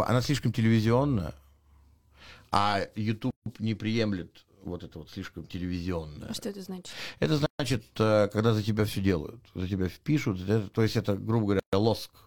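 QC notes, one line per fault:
3.31–3.46 s, 7.46–7.60 s, 11.60–11.73 s: gap at a join of encoded pieces. Silences of about 156, 133 and 133 ms cut into the running speech, before "не приемлет вот это" and "э когда за тебя", with codec-smeared edges. Separately encoded 4 s pieces were joined without trimming encoder delay and final-frame padding. Unlike a dropout, the gaps recur at regular intervals and the sound resumes from where it stopped, with nothing missing.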